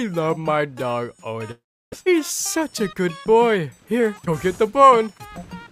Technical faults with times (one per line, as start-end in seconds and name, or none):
1.51-1.94 long network dropout
3.91-5.64 jitter buffer speed-up